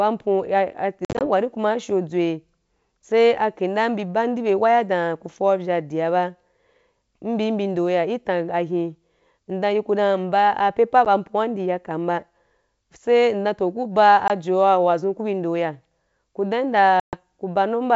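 Packet loss on an ADPCM call cuts hard-edged silent gaps at 1.05–1.26, 11.05–11.07, 14.28–14.30 and 17.00–17.16 s. The out-of-step decoder then resumes with brief, slight distortion.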